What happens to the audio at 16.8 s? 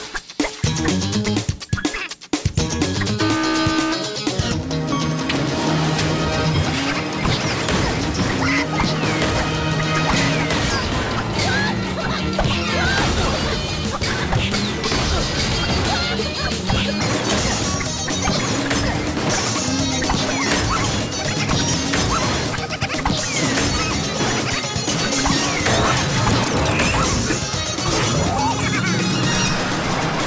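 At 16.8 s you're still inside a wrong sample rate stretch, 10.70 to 17.01 s: audio recorded at 22 kHz plays back at 16 kHz, so everything runs at 0.726 speed and drops about 5.5 semitones.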